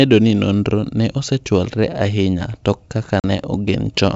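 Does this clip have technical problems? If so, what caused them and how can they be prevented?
Yes. Packet loss on an ADPCM call, over wideband G.722 coding at 64 kbit/s, punches a 40 ms silent hole from 3.20 to 3.24 s, about two packets' worth. The waveform drops abruptly to silence, and the spectrogram shows a clean, hard-edged vertical blank band. Afterwards, the decoder's adaptive predictor and step size must resynchronise with the sender's. Packet loss concealment, an adequate jitter buffer and forward error correction on the network path would prevent it.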